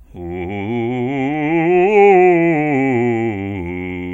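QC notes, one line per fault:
No technical faults are audible anywhere in the music.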